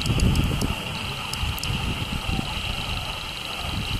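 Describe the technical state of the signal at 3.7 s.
At 3.7 s the signal is intact, with no dropout, distortion, glitch or other technical fault.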